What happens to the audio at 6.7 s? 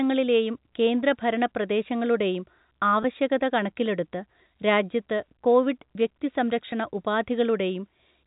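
A packet loss with pitch repetition occurs at 6.71 s. About 10 ms of audio went missing, which fits a single lost packet, and the receiver filled the gap by repeating the most recent pitch period of the speech instead of leaving silence. Because the gap is so short, the repeated cycle never fades into silence; it sounds like a brief held, slightly buzzy tone before the speech continues, within the narrow telephone band of the G.711 coding.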